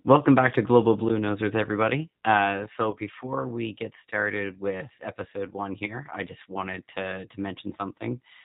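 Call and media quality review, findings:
G.729 codec, whole clip. Speech band-limited with nothing above 4 kHz, slightly rough, synthetic texture throughout, damage plainly audible. Probable component: narrowband VoIP leg. Mechanism: speech resynthesised from vocal tract filter, pitch predictor and sparse pulse excitation per 10 ms frame; character fits G.729A at 8 kbit/s. Fine detail and sibilance lost by design of the codec, not by the transport.

VoIP packet loss concealed by the speech codec, 2.91–2.96 s, just before "we get started with". Brief smeared stretch with dip in level; consistent with one lost 20 ms packet. Decoder extrapolated last pitch and filter at falling gain.

Same fault, 5.86–6.00 s, between "started with episode one" and "I just wanted to". Again fits a single lost 20 ms packet; weakened, distorted speech across the roughly 140 ms span as decoder state recovers frame by frame.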